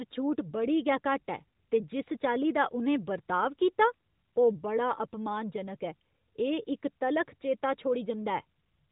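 No technical faults can be heard in this speech clip.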